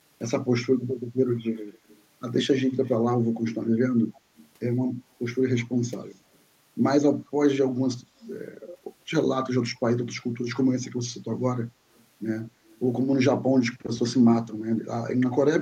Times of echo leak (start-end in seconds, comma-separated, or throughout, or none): 1.73-2.03, 2.84-2.94, 4.14-4.47, 5.85-5.91, 12.69-12.79